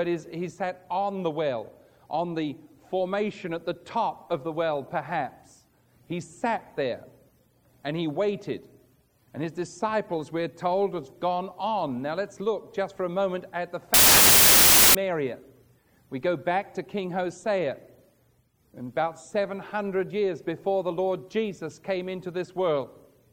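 From 13.94 to 14.95 s, roughly a second, the audio turns into loud, harsh broadband noise: samples built from the wrong bytes. The reader has the byte order or alignment off, so the jittery low bits land in the high part of each value and swamp everything.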